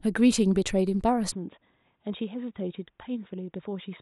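A speech recording whose sound changes abruptly at 1.32 s and stays changed to the end. From that point nothing is present above 3.8 kHz, so the voice turns dull and boxy, the level falls by about 5 dB, and a faint new background noise appears well below the speech. The change happens with no gap or silence. The likely cause is an input switched to a poorer device, such as a different microphone or a headset's narrowband call profile.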